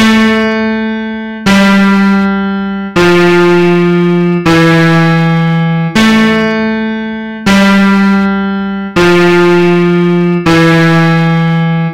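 Hard clipping runs through the whole clip. The audio hits the ceiling about 16 dB too hot, so roughly a third of the samples get sheared flat. Those flattened peaks throw off high harmonics, and every loud moment comes out as a harsh, gritty fuzz.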